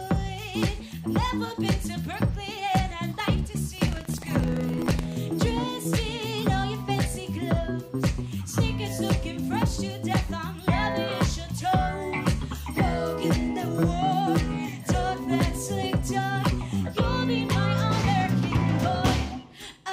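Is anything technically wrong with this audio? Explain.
Yes, there is one fault. From 3.80 to 5.19 s, buffer tearing: writer and reader pointers cross each period, splicing in a small slice of audio about a tenth of a second old. This produces a 23.4 Hz robotic rattle, consistent with a 2048-sample buffer. Unlike isolated dropout clicks, it is a steady periodic buzz that follows the signal.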